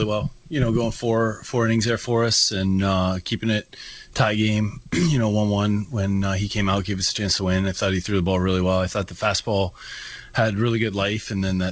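Nothing stood out on listening; the sound carries the narrower top end of a call path, with nothing above about 8 kHz, which fits a G.722 link.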